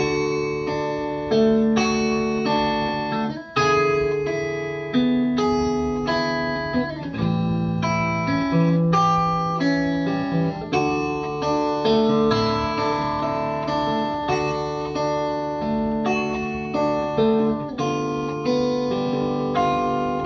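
Nothing technically wrong can be heard anywhere in the recording. The audio holds steady throughout, with no moment that calls for a time or a cause.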